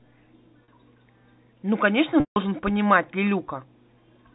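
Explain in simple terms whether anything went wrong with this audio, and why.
Packet loss with pitch repetition hits twice: at 0.64 to 0.68 s, a brief buzzy hold; at 2.2 to 2.36 s, a longer stretch fading out. Unlike a plain dropout, the gap is filled by repeated sound rather than silence.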